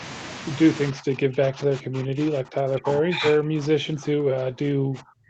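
From 0.92 s to the end, the echo canceller was likely unable to separate the near talker from loudspeaker echo while both sides spoke at once, so it attenuated the speech itself. This speech suppressed in double talk makes the speech dip and break up, falling by about 40 dB at its deepest.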